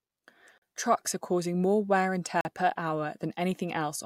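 At 0.58 s the speech drops out for 40 ms, a short hole. The same happens at 2.41 s, just after "causing more wear and", again 40 ms long. Both are a block of digital silence: a run of samples replaced by silence with no fade in or out, so the waveform jumps abruptly at both boundaries. The cause is either the output buffer not being filled in time or a calculation producing invalid values.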